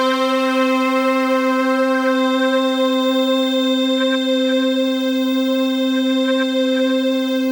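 The audio carries a feedback whistle from 2.04 s through to the end: a thin, steady tone at 3.6 kHz sitting roughly 15 dB below the main sound and swelling and fading slowly in level. This is likely a loudspeaker-to-microphone loop held just at the edge of feedback, ringing at one frequency without building up. On a spectrogram it shows as a narrow horizontal line at 3.6 kHz; on the waveform it barely alters the envelope.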